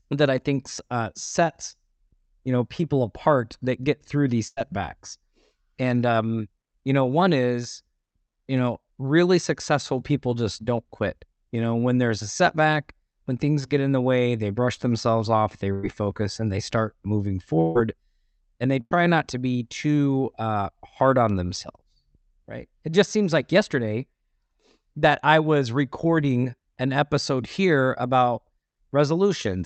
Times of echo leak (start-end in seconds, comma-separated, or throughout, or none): none